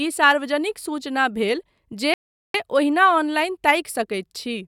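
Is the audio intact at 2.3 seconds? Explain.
No. A rebuffering stall runs from 2.14 to 2.54 s: playback ran out of downloaded audio, so the speech drops to silence for 0.4 s, then resumes exactly where it stopped.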